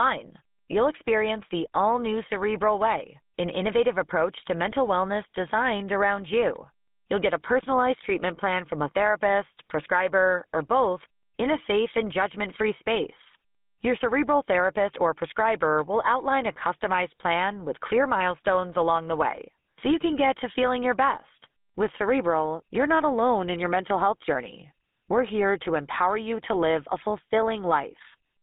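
GSM full-rate codec throughout: a vocal-tract model driven by sparse pulses, fitting 13 kbps, leaves speech plainly buzzy and gravelly, confined to 200 Hz to 3.6 kHz.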